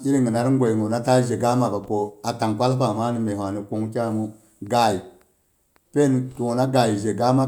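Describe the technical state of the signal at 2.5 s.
The signal at 2.5 s is intact, with no audible fault at that point in the speech.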